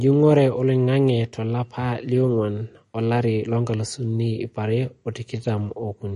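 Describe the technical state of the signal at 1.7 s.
At 1.7 s the signal carries MP3 compression damage, as it does for the whole clip. The encoder was likely starved of bits, which fits a low rate around 40 kbps, so it cut everything above 10.6 kHz and dropped weak frequency lines that then switch on and off between frames. The speech comes across dull at the top, with a watery, swirling texture, metallic chirps on s sounds and smeared attacks.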